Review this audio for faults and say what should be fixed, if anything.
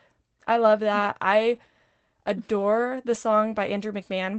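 Two lost packets rebuilt from error correction: at 1.55 s, after "I love that", and at 3.13–3.15 s, after "adore the". Each lost 20 ms packet was replaced by a low-bitrate copy carried in the following packet, so there is no gap, just a brief rougher, noisier patch. The Opus call path's band limit near 8 kHz is present throughout. To prevent this, reduce packet loss on the network path, for example with a steadier connection or prioritised voice traffic.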